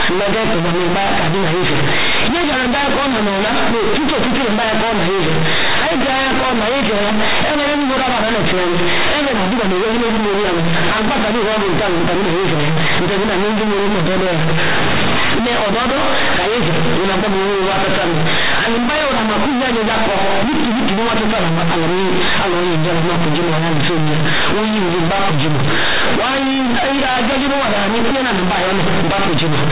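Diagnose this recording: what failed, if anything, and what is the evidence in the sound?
The sample-format conversion failed: mu-law companded audio was read as linear 8-bit samples, with no expansion back to linear. Every sign change in the encoded speech now throws the output across roughly half its range, so quiet passages come out as loud as peaks. Throughout the clip the speech is very loud and harshly buzzy, the waveform is badly misshapen, and the pauses fill with strong noise instead of near-silence.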